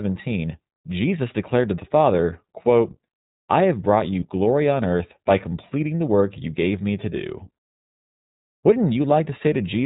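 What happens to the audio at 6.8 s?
At 6.8 s the speech carries the same iLBC codec coloration heard across the whole clip, not a fault confined to that moment. The band stops at 4 kHz, so sibilants and consonant edges are dull. Each short block of excitation is coded on its own, which fits 20 ms frames at around 15.2 kbps, and that gives the plainly audible rough, slightly synthetic buzz on the voice.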